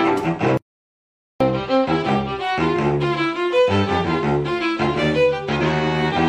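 At 0.57 s the audio cuts out abruptly and does not return until 1.40 s, a gap of 0.83 s. This is an audio dropout to silence: the gap is silent, with no room tone or noise floor underneath, and whatever sounded during those 0.83 s is simply gone. The hard edges on both sides suggest the recorder kept writing samples after its input was lost, likely through a disconnected source, a broken link or an accidental mute.

From 5.58 to 5.63 s there is a short glitch lasting about 50 ms. This is damaged data in a compressed stream. A stretch of the encoded stream was corrupted, so the decoder could not read those frames correctly. It lost sync and searched for the next valid frame header. The result is a brief artefact sitting abruptly in the material.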